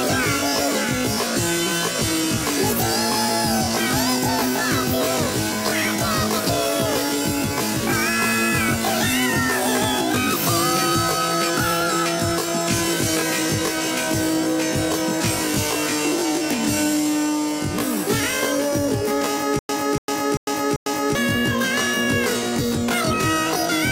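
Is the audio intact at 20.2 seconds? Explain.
No. At 20.2 s the audio sits inside a stutter with silent gaps running from 19.59 to 21.15 s. A burst of about 288 ms repeats four times, each followed by roughly 102 ms of digital silence, so the same fragment returns every 390 ms at an even pace. The likely cause is a playback or stream stall, with each retry replaying the last buffered fragment before running dry. The audio that belonged in that span is lost.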